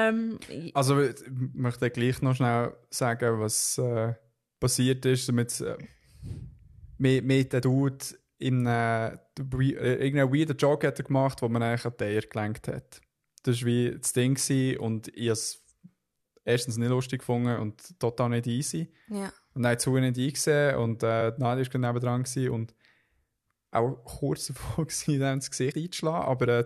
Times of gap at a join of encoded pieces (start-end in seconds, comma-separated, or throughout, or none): none